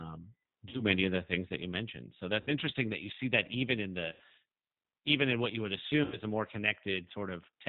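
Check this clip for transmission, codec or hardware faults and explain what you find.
Two faults affect the speech: a low-bitrate codec throughout and four short dropouts covered by concealment.

The G.729 codec makes the whole clip sound slightly rough and synthetic, with nothing above 4 kHz. That fits an 8 kbit/s G.729A stream, which rebuilds each 10 ms frame from a vocal-tract filter, pitch prediction and a few pulses.

VoIP packet loss concealed by the speech codec occurs at 0.69–0.84 s (before "many of the things"), 2.41–2.51 s, 4.12–4.22 s (after "see that even in") and 6.04–6.18 s (between "in what you would" and "a more"). Each time the sound smears into a fading buzzy tone or coloured noise, and the speech recovers weakly. The decoder repeated its last pitch and filter with falling gain over gaps of 40, 60, 80 and 80 ms, which fits two to four lost packets.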